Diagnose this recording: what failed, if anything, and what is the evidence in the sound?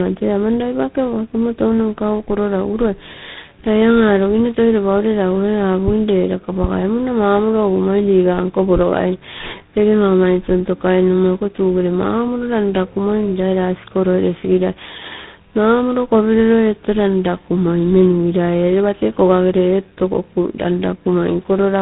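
The failure is at the codec stage: tandem speech coding. The speech sounds rough, muffled and warbly for the whole clip, with nothing above 3.8 kHz. The grain points to two speech codecs in a row, likely a GSM-type coder feeding a low-rate ADPCM coder such as G.726 at 24 kbit/s. Each border decoded the speech and coded it again. The second coder then worked on the first coder's errors, so the damage stacked.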